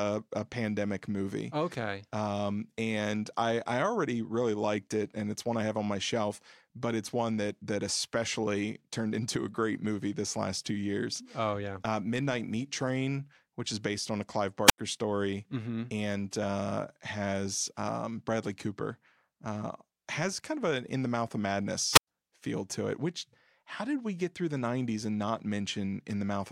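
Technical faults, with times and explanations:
14.66 to 14.78 s and 21.93 to 22.07 s, wireless microphone squelch dropout: a short burst of hiss gives way to near silence, about 83 ms and then about 102 ms, the second falling between "in the mouth of" and "feel to it which". The analogue FM signal faded, and the receiver's squelch muted its output.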